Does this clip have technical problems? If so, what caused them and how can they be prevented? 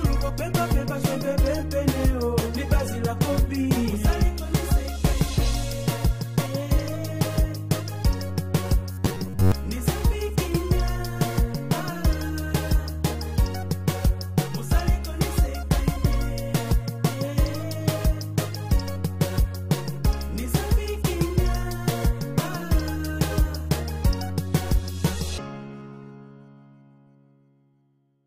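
Yes. From 8.92 to 9.52 s there's robotic sound from repeated short buffers: the sound turns into a rigid, metallic buzz at about 93.8 Hz that only loosely tracks what's underneath. The likely cause is new audio arriving too late, so playback kept looping the last chunk, roughly 10.7 ms long given that buzz pitch, while most of the real audio in that stretch got skipped. To prevent it, give the capture and playback chain more buffer headroom and keep CPU or network hiccups from starving it.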